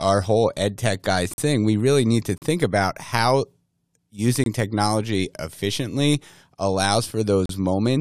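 Four hard-edged silent holes cut into the speech: at 1.34 s (about 45 ms, after "whole ed tech guy"), 2.38 s (40 ms, before "about how"), 4.44 s (23 ms, before "technology efficiently") and 7.46 s (36 ms). It's a gap between stream segments. The timestamps of neighbouring roughly one-second chunks don't quite meet, so the player pads the space with silence and nothing is actually lost.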